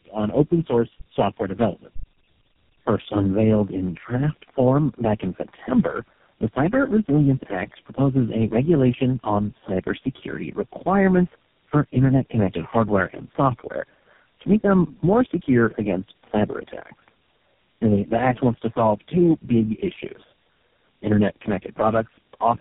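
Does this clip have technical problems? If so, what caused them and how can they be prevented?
Yes. Tandem speech coding affects the whole clip. The speech went through four speech codecs in a row, ending in GSM full rate, and each one re-coded the previous one's degraded output. The result is rough, muffled and warbly, with nothing above 3.6 kHz. To prevent it, keep the call in a single codec end to end, for example with transcoder-free operation between networks.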